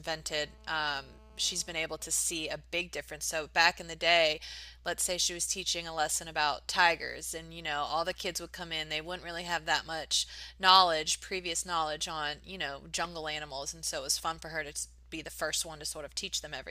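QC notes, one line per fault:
0.34 to 1.74 s: GSM phone buzz. A hard, raspy buzz at 217 Hz, rich in harmonics, sits about 29 dB below the speech. A nearby 2G phone in a call bursts 217 times a second, and the audio circuit rectifies those radio pulses.
1.81 to 2.54 s: GSM signalling bursts. The buzz breaks into even ticks with a longer 217 Hz buzz twice a second, roughly 30 dB down. The phone's user has gone silent, so only short groups of bursts are sent and rectified.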